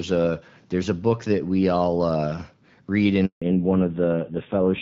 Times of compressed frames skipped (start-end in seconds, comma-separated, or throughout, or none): none